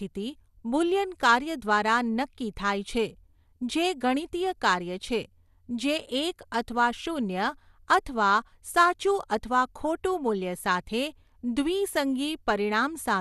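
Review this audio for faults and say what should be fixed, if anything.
Throughout the speech, the audio was likely squeezed through MP2 compression at a low bitrate, around 80 kbps, so upper sub-bands are dropped and the rest coarsely quantised. Nothing remains above 12.1 kHz, leaving it dull, with audible gurgling, granular distortion. Prevent it by encoding from the original source at a higher bitrate or with a more efficient codec.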